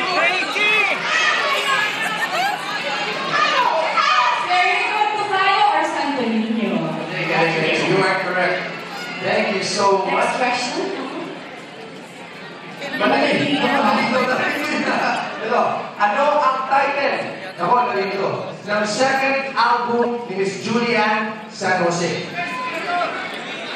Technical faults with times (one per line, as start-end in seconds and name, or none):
3.29-3.34 corrupt frame decoded
15.14-15.21 corrupt frame decoded
20.02-20.06 corrupt frame decoded
21.41-21.46 corrupt frame decoded